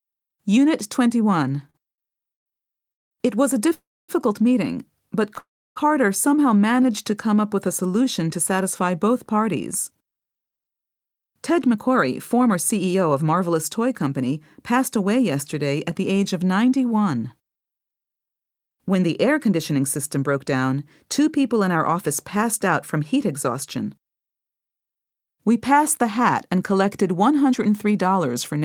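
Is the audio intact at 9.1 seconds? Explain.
Yes, the speech is intact at 9.1 seconds, with no dropout, click, distortion or other fault to be heard at that moment.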